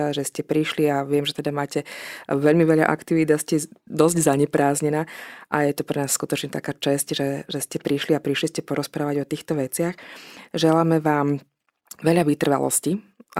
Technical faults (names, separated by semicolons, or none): none